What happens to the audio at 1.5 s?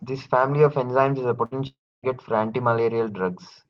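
A burst of packet loss from 1.45 to 1.53 s: the last sound is stretched and faded for about 57 ms, then resumes with about 60 ms skipped, showing as a smeared, decaying patch on the spectrogram.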